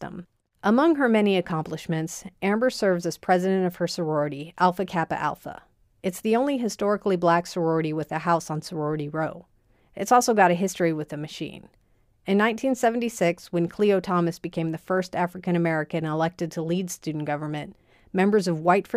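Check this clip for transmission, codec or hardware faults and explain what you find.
No faults found in the speech recording, so nothing to flag.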